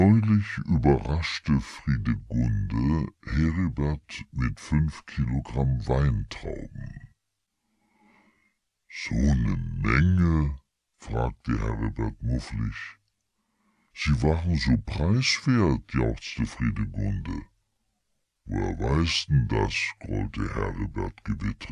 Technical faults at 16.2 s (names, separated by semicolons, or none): wrong sample rate